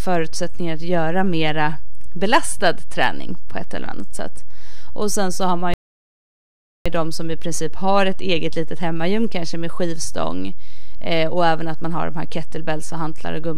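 A DC offset runs through the whole speech clip: the waveform sits shifted away from zero by a constant amount, so its centre line never matches the zero axis. You cannot hear the offset itself, but it eats into headroom on one side, bringing peaks of that polarity closer to clipping. On a spectrogram it appears as a steady band of energy pinned at the very bottom, at 0 Hz, from start to finish.

At 5.74 s, right after "sen så har man", a rebuffering stall cuts the speech off into silence until 6.86 s, when it picks up again with "ju de som i". The player ran out of downloaded audio and waited for more. Because playback resumes exactly where it paused, nothing is skipped, but about 1.1 s of dead air is added. The waveform shows a flat gap, and the spectrogram shows a blank vertical stripe with hard edges.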